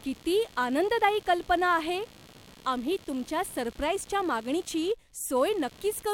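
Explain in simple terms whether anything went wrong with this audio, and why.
Yes, something went wrong. Throughout the clip, under the speech, there is computer activity noise: a faint buzzy, chirpy rattle pulsing roughly seventy times a second, well below the speech. The computer's own workload, such as the processor or mouse, is disturbing the ground wire the audio circuit shares. Unlike steady mains hum, this buzz follows what the computer is doing, not the speech or the electricity supply.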